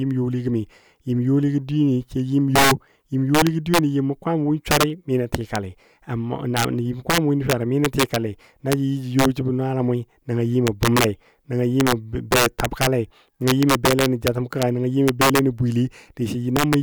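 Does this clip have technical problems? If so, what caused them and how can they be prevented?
Yes. Throughout this speech clip, the loudest peaks break into violent, sharp cracks, much harsher than ordinary clipping. This is integer overflow: the signal was driven about 7 dB past the largest value the integer format can hold, and instead of being limited, those samples wrapped around to the opposite extreme of the range. Only around one percent of samples crossed the limit, so the cracks land on the loudest moments. Preventing it means using saturating arithmetic or a limiter, with enough headroom before converting to integer.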